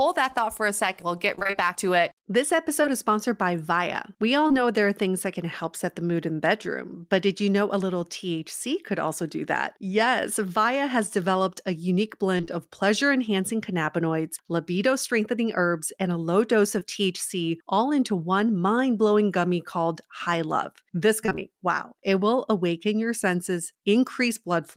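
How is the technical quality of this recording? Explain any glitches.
The recording has packet-loss damage in four places, all patched by the receiver's concealment rather than left as silence.

Between 1.35 and 4.56 s there are scattered short gaps: about seven separate holes, none much longer than 20 ms, together roughly 150 ms of filled audio, around 5% of that stretch. Each time a packet failed to arrive in time, the decoder extended the preceding sound to cover the hole. Because the holes are brief and spaced apart, they come through as isolated ticks and small smears.

Repeated packet loss, with its robotic sound, occurs twice. From 12.38 to 12.50 s, three gaps totalling 60 ms (the longest 28 ms) mean half of that window is synthesized. From 21.26 to 21.39 s, four gaps remove 80 ms, with 57 ms concealed and the longest hole 20 ms, about 42% of the span. With holes this close together, the extrapolated segments run into one another, giving a choppy texture with fragments of speech missing.

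At 16.80 to 16.86 s there is a short concealed packet loss: 20 ms never reached the decoder, and 14 ms of substitute audio was generated from the preceding signal and crossfaded back into the real stream. It is heard as a single brief wobble or smear, and a short consonant there can drop out.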